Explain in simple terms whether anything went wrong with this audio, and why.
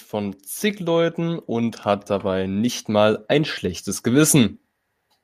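Automatic gain rising, from 0.1 to 4.6 seconds: the recording's volume control judged the input too quiet and slowly turned itself up. Over those four and a half seconds, the voice and the background noise grow louder together.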